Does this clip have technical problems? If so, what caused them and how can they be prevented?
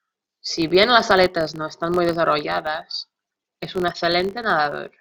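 Yes. A filter restarted on every block: it drops its stored state at each block boundary and starts from silence, so each block opens with a small transient. Throughout the speech this makes a buzz at about 46.9 Hz, rising and falling with its level, which fits a 1024-sample block. Preventing it means keeping the filter's state between blocks rather than resetting it.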